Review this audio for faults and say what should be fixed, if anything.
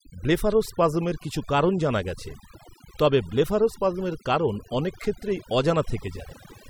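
Throughout the speech, the background drops and breaks up into twinkling, chirpy specks. This is overdone noise removal: a noise reducer set too aggressively is pulling individual frequency bands down whenever they sit close to its noise estimate, taking the quieter parts of the voice along with the noise. To prevent it, use a gentler reduction amount, or capture cleaner source audio so heavy processing isn't needed.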